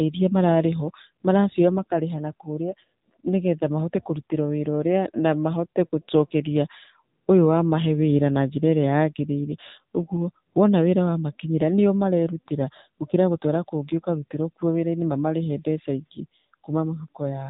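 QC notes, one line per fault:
Throughout: AMR narrowband mobile codec. The speech is band-limited to the telephone range, with nothing above 4 kHz, so sibilants and consonant detail are dulled and the voice sounds boxed-in. The encoder rebuilds each 20 ms frame from a vocal-tract filter excited by a sparse set of pulses. At this coarse setting that gives a plainly audible buzzy, synthetic edge to voiced sounds, which fits one of the lower AMR-NB modes, around 7.4 kbps.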